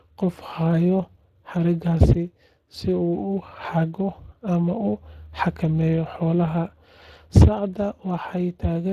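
Speex codec damage runs through the whole clip: the speech has been squeezed by this CELP coder, whose limited excitation bits leave it plainly hoarse and noisy, consistent with a mid-range setting near 22 kbps, and nothing remains above 15.2 kHz.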